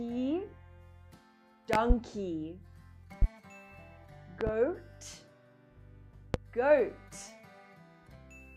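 Loud pops land at 1.73–1.94 s, 3.22–3.26 s, 4.41–4.51 s and 6.34–6.38 s. The first and third are double pops, and the other two are single. The first stands about 25 dB above the sound, and the last is around 20 dB. Each is a sharp thump over audio that carries on underneath, likely a voltage step from a plug, switch or static discharge that the following circuitry shapes into a brief pulse.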